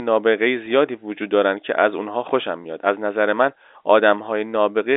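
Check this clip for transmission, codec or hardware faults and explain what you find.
Two brief dropouts of the packet loss with pitch repetition kind occur, at 0.66 s and 2.64 s, over a G.711 telephone line band of about 300 Hz to 3.7 kHz. Each gap lasts about 10 ms, which fits a single lost packet. The receiver bridges it by repeating the last pitch period of the speech, so each event sounds like a very short held, slightly buzzy blip before normal speech resumes.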